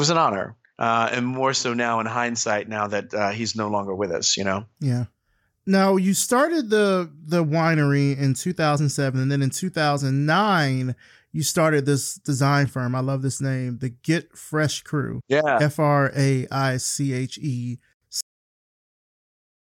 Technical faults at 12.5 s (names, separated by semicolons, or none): none